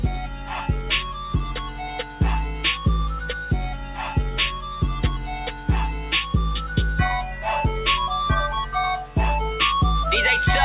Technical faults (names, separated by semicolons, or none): sound cut by the noise suppressor